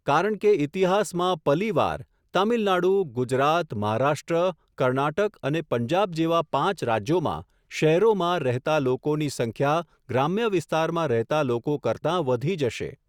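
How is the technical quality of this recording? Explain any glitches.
No technical glitches turn up anywhere in this speech recording. There is nothing in the audio that calls for an explanation.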